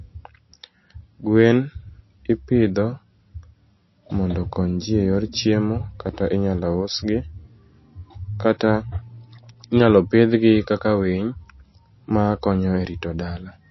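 A speech clip with MP3 compression damage all the way through, and it's plainly audible. Nothing gets above about 5.8 kHz, so the treble is simply gone and the s sounds come out dull and lispy. Around what's left there's that watery, swirly texture from weak frequency lines dropping in and out between frames. That's likely an MP3 encoder starved of bits, and the sound fits a very low bitrate of roughly 26 kbps.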